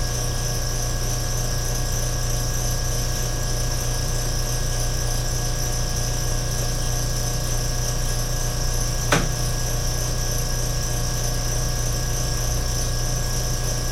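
Nothing in the sound stood out as a technical fault on listening.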